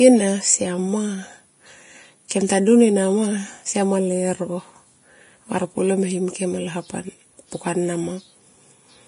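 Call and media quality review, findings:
Likely Vorbis compression, entire clip: coarse treble quantisation at a low bitrate, roughly 30 kbps. Nothing above 10.6 kHz. Heavy damage: upper detail replaced by noise of matching energy, so speech sounds hissy and grainy, with roughened tones and smeared consonant attacks.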